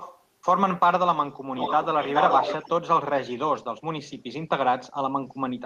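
From 0 to 0.24 s and again from 1.56 to 2.7 s, there's an echo leak, a copy of the speech trailing about 0.42 s behind, faint at first, then nearly as loud as the speech. Likely a far-end speakerphone whose echo canceller let it through.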